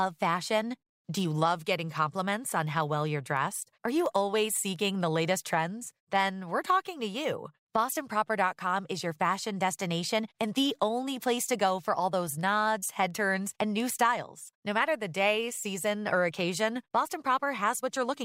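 From 0.59 to 17.97 s, word clock ticks recur about every 0.7 s. An unlocked clock, roughly 30 ppm off, drops or repeats single samples.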